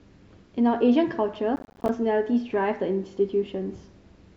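From 1.56 to 1.89 s, the speech breaks into processor overload crackle. The processor misses buffer deadlines many times in a row, each miss leaving a short hard-edged silence. The gaps suggest buffers of around 10 ms. Together they form a gritty tearing burst that stops at 1.89 s.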